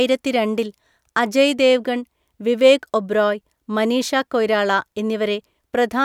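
Nothing goes wrong anywhere in this speech recording, so there's no technical fault to point to.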